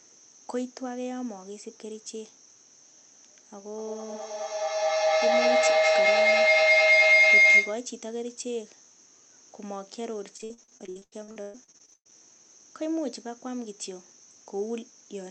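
From 3.78 s to 7.94 s a piercing tone climbs over the speech, settling near 2 kHz and peaking at about 15 dB above the voice, with a throb roughly every fifth of a second. This is feedback howl: a microphone is picking up a nearby loudspeaker on the same call, and each pass around that loop comes back louder. The loop's round trip sets the pulsing, and its favoured frequency takes over until the loop is broken.

Between 10.37 s and 12.14 s the voice turns choppy, breaking up into short stutters, the longest lasting about 120 ms. This is repeated packet loss, the robotic-sound kind. Audio kept failing to arrive in time, and each hole was patched by stretching the last fragment before the next hole arrived. Close to half of that stretch is patched-in sound. The rest passes through the Opus call path, whose coding caps the audio at about 8 kHz.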